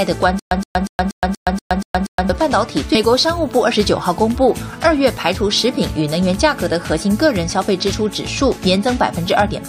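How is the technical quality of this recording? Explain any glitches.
The recording has two clear playback glitches, both early in the clip.

From 0.39 to 2.29 s there is a stutter with silent gaps. The same 119 ms fragment of sound repeats 8 times, each followed by about 119 ms of silence, giving an even 239 ms cycle. This is likely a stalled player that replayed its last buffer on every retry, then ran dry, so the audio from that stretch is lost. On a waveform it looks like identical blocks alternating with flat lines. A spectrogram shows a repeating stamp pattern separated by empty columns.

At 2.94 s a stream segment is skipped. A segment likely failed to load and the player moved on to the next one, so the sound jumps ahead abruptly with a small blip. A waveform shows a sudden discontinuity at the join, and a spectrogram shows a brief vertical broadband line where the content changes without transition.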